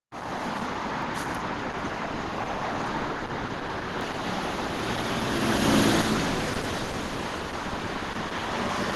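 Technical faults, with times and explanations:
Throughout: Opus compression. Everything above 12 kHz is gone and the sound is muffled and hoarse, likely from 16 kbps hybrid-mode encoding.
1.02, 4.01, 4.61 and 7.42 s: dropped buffer (overrun). Each is the sound jumping ahead with no silence between, about a third of a second missing at the first two and about a tenth at the last two, likely from samples being overwritten before they were read.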